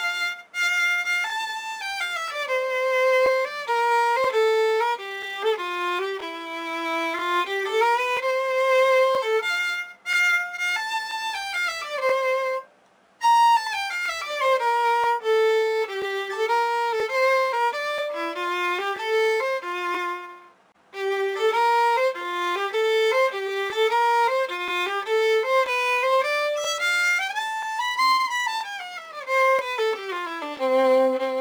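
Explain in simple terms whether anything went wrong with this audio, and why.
Something did go wrong, and it lasts the whole clip. The fault is crude rate conversion. The audio's sample rate was changed without proper filtering, likely from 48 kHz down to 44.1 kHz. Samples were simply dropped or repeated to fit. Those small jumps repeat in a steady pattern. That pattern creates extra tones that don't belong to the sound. You hear it as a gritty fizz riding on the louder and brighter moments.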